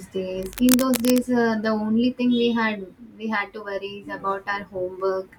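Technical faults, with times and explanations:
0.42–1.19 s, cable scratch noise: a worn cable or connector is likely being shifted, its contact resistance jumping rapidly, which lays dense, ragged bursts of noise over the speech, only a little quieter than it, heard as scratchy rustling for under a second.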